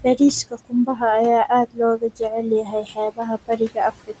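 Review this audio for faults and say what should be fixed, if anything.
The background noise drops away between phrases and swells back under the talker. These are noise suppressor artifacts: the suppressor treats every band it judges to be steady noise as something to remove, frame by frame, and here it pulls those bands down by about 17 dB. The room noise sits only about 16 dB below the speech. To prevent it, reduce the suppressor's maximum attenuation or smooth its gain over time.

Parts of the speech itself turn faint or swallowed, as if the talker briefly moved away from the microphone. This is speech cut by the noise suppressor. It happens from 0.44 to 1.02 s, affecting roughly a third of a second in total, then from 1.66 to 1.79 s, 1.97 to 2.21 s, and from 2.42 s to the end. The dips reach about 17 to 18 dB. The suppressor mistook quiet speech energy for noise and turned it down along with the background. 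To prevent it, use a gentler suppressor setting or one with better speech detection so that soft consonants and endings are kept.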